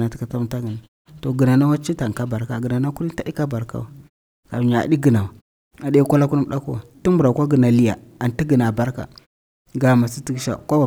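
No technical faults can be heard in the speech. In the pauses the output fades to silence and the background drops away, then it comes back in time for the next sound.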